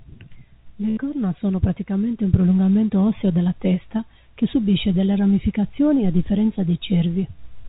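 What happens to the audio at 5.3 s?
Nothing goes wrong at 5.3 s: the speech carries on intact through that moment, with only the narrow telephone-style band of the call path, which has nothing above about 4 kHz.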